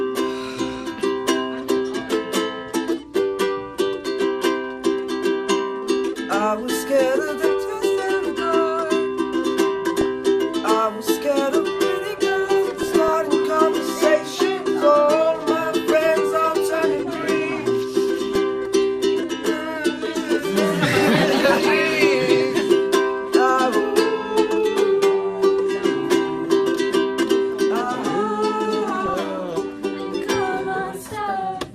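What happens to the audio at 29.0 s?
From 28.96 to 29.14 s there is DAB burbling: bit errors corrupt sub-band samples and scale factors, giving a brief burst of burbling noise across 9 frames. On a spectrogram it shows as isolated blocks flaring for single frames.

Throughout, the audio sounds dull and granular, likely from MP2 compression at a rate that fits 80 kbps, with upper sub-bands missing as flickering gaps on the spectrogram.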